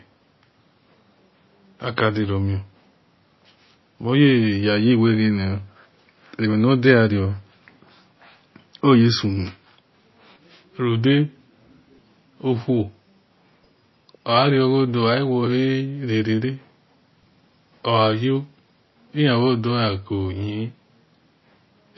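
MP3 compression, throughout: nothing survives above 5.8 kHz and the speech sounds watery, likely from an MP3 encoder starved of bits, consistent with roughly 24 kbps. Pre-echo at 1.96 s: a short hiss of about 16 ms precedes a sharp attack, where block-spread quantisation noise leaks ahead and softens the onset.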